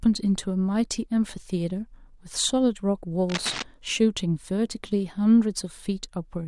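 Cable scratch noise runs from 3.29 to 3.62 s in this speech recording: a dense, uneven burst of scratching and rustling sits over the sound, only about 10 dB below it. The likely cause is a worn cable or connector being moved, its contact resistance fluctuating rapidly.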